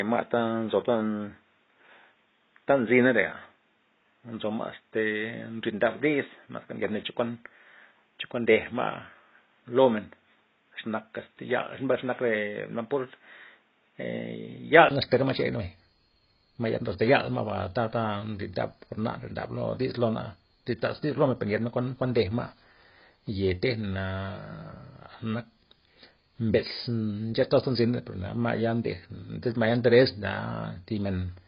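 A speech recording with two faults. From the start to 14.91 s, the band stops at 3.8 kHz over faint added background noise, then a 20 ms silence and fuller sound follow, likely an input switched to a poorer device. Unlike codec loss, this shift happens at one moment. Throughout, nothing passes above 5.1 kHz, with heavy smearing, likely AAC compression at a low bitrate, consistent with about 16 kbps.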